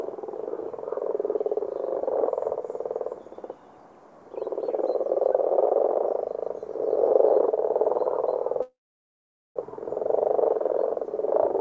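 A recording of everyday sounds, carried over a call link whose G.722-style coding leaves nothing above 8 kHz. At 8.62 s the audio stalls in a call audio freeze until 9.58 s. The last sound carries on briefly as a fading fill, then drops to silence for about 0.82 s. The likely cause is packets held up in transit, so the jitter buffer ran dry. When playback resumes, it picks up where it stopped. Nothing is lost, but everything after arrives about 0.94 s late.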